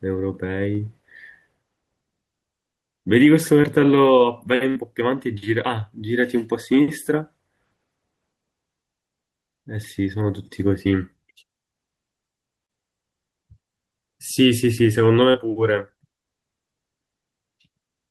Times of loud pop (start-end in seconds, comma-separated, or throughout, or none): none